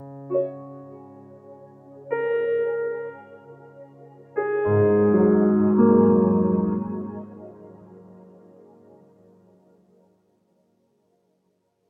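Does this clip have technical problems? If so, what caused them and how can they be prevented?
Yes. A noise suppressor applied to music or sounds runs throughout. A speech-tuned suppressor treats held tones and decaying tails as noise, pulling them down by about 20 dB while attacks pass. Unlike compressor pumping, which follows loud peaks, the dips land on sustained material. Disable speech noise suppression, or switch the input to a music mode, before recording non-speech sources.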